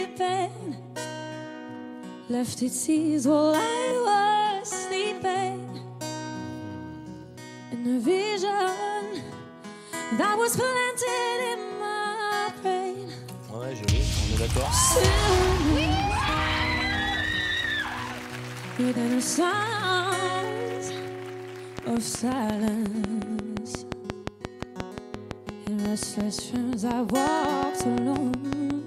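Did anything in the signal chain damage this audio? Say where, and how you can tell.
Yes. A train of clicks runs from 21.79 s to 28.71 s, about forty in all. They tick at a steady 5.6 per second, peaking about 15 dB above the signal. The even shape and pace point to a likely cause of electrical interference coupling into the analogue wiring.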